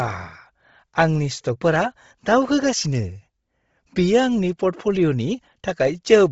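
Throughout, the speech sounds breathy and grainy; a spectrogram shows a hard ceiling at 7.7 kHz with noisy upper bands, likely Bluetooth LC3 compression.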